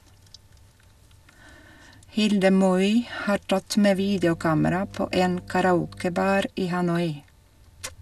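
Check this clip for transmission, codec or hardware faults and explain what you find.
One fault is present: mains hum. From 3.98 s to 6.43 s, just after "tatt med", a steady 50 Hz tone sits roughly 20 dB below the speech. A ground loop or nearby transformer is coupling the power line into the signal, adding a low, constant drone with a few low harmonics. On a spectrogram it shows as a flat horizontal line at 50 Hz with fainter lines at multiples above it. On the waveform it appears as a regular low-frequency ripple under the speech.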